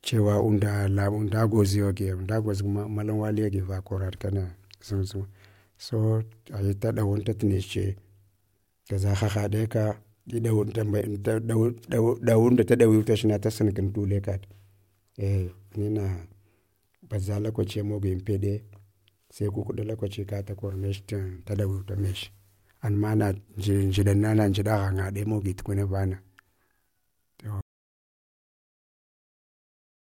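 From 27.61 s the input likely dropped and silence was written: an audio dropout to silence, cutting the speech into dead, toneless silence through the end.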